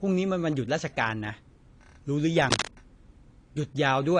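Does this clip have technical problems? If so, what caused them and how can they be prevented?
Yes. Throughout the speech there's audible AAC compression damage: nothing gets above about 10.2 kHz, so it sounds dull, and the sibilants and sustained sounds have a smeared, warbly, fizzy texture. That's likely low-bitrate AAC-LC, which fits something around 32 kbps. The encoder runs short of bits, so it drops the top end and quantises the rest coarsely. To avoid it, record and export at a higher bitrate or in a lossless format.

From 2.51 to 2.69 s there's a burst of cable scratch noise, a dense, uneven rustling roughly as loud as the speech itself. It's likely a worn cable, connector or pot being moved, so its contact resistance jumps around and dumps noise bursts into the signal. To prevent it, swap or clean the suspect cable and connectors and keep leads still while recording.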